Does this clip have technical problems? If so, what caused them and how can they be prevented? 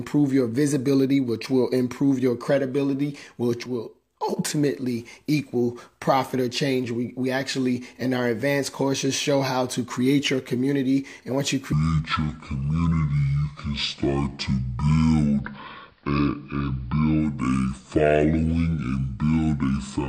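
Yes. From 3.66 to 4.37 s the level drops abruptly by about 6 dB and then returns. This sudden gain jump likely comes from a digital gain change applied without a ramp. Apply gain changes with a short fade rather than a single-sample step.

From 11.73 s to the end the sound runs at 0.564 times normal speed, deep and slow, roughly ten semitones low. This section at the wrong speed probably comes from the segment being played or rendered against the wrong clock. Check that every section uses the correct sample-rate clock.

From 15.20 to 17.44 s the digital radio is blending to analogue AM over 266 ms. Level falls about 2 dB, and hiss rises to roughly 40 dB below the signal. Improve reception and keep the analogue and digital streams time-aligned.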